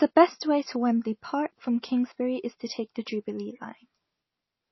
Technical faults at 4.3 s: MP3 compression

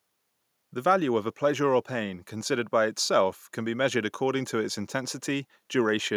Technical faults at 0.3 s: none

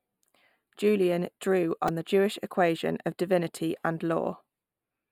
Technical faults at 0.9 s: channel delay (comb filtering)

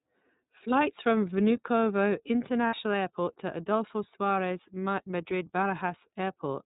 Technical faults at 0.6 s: iLBC codec

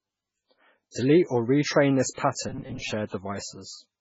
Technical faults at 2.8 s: MP3 compression; robotic sound from repeated short buffers

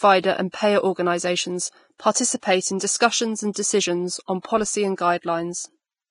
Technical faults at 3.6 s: Vorbis compression; pre-echo

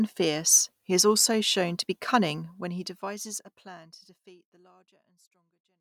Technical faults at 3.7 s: none

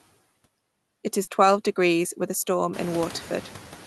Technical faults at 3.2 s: noise suppressor artifacts

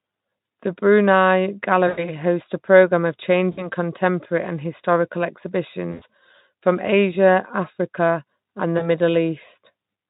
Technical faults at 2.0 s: VoIP packet loss concealed by the speech codec

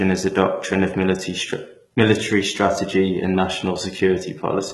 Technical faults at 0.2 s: HE-AAC compression

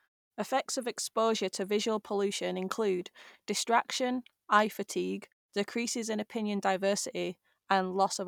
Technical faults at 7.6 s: none

